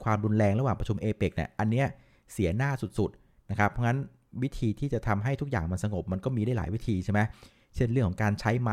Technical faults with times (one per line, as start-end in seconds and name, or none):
none